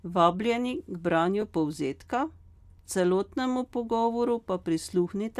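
At 1.41 s the speech has a brief, grainy smear. These are lost LE Audio frames. The decoder likely refilled one missing 7.5 ms frame with a noisy copy of the previous one.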